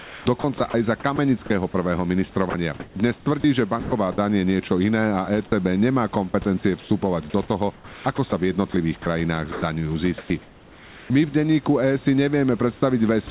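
From 0.0 to 1.74 s the speech is chopped by the voice detector. The sender likely switched its transmission on and off several times. About 440 ms of quiet syllables and word edges become synthetic noise. The speech sounds choppy. The room noise sits about 26 dB below the speech. From 2.5 to 4.18 s the same chopping returns, with about 500 ms replaced.

At 6.30 to 6.34 s the voice detector drops sound. A quiet fragment was likely taken for background, so sending stopped. About 20 ms of speech is lost, and 40 ms of steady noise plays in its place. The sound returns once the detector triggers again.

From 6.3 to 6.9 s comfort noise replaces the background. During the pause the sender likely sent only occasional noise updates. The receiver builds a roughly similar hiss from them. About 140 ms of real background becomes smooth, featureless noise.

From 7.48 to 9.62 s the speech is chopped again, with about 540 ms replaced. 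From 10.18 to 11.1 s comfort noise stands in for the background for about 800 ms. At 13.3 s the detector drops the last moment of sound. Throughout, nothing is heard above 4 kHz, which fits a narrowband call codec.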